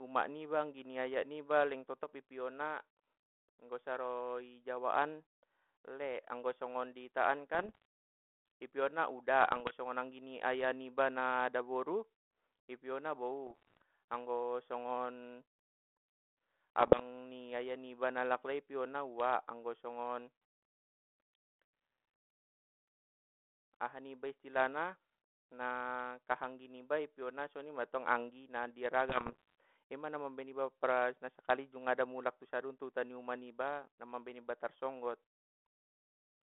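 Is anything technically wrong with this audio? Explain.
Yes. Five short stretches break into pops and rough, gravelly bursts with brief jumps in level: 7.54 to 7.85 s, 9.42 to 9.75 s, 13.47 to 13.82 s, 16.80 to 17.03 s and 29.09 to 29.55 s. These are bit errors on an ADPCM link, with roughly half a percent to one percent of bits flipped. On this telephone-band channel, whose sound fits 32 kbit/s G.726, each wrong bit knocks the decoder's predictor and step size off track, so the damage rings on for several milliseconds.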